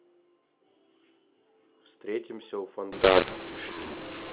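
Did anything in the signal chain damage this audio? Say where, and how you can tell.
Yes. At the codec, mu-law and A-law were mixed up: from 2.92 s to the end at 4.33 s, mu-law telephone samples are decoded as A-law. The speech turns harsh and distorted, levels scramble, and pauses fill with noise as near-silent codes are lifted.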